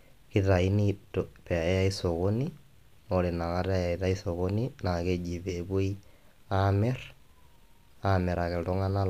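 Listening closely across the whole recording turned up nothing in the speech that stood out as a technical problem.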